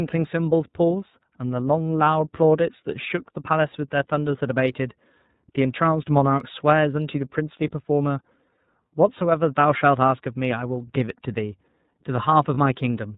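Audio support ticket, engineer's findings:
iLBC codec, full clip: speech band-limited, nothing above 4 kHz, slightly rough, synthetic texture, plainly audible. Fits iLBC's 30 ms frame mode, around 13.3 kbps. Each frame's excitation coded independently; narrowband ceiling removes sibilance and air.

Lost iLBC frames, 12.54 s: 30 ms dropout, sounds like one missing frame. Decoder concealment repeats last pitch cycle with added noise, giving a brief held, buzzy vowel. Recovery immediate on next frame, since iLBC frames don't depend on predecessors.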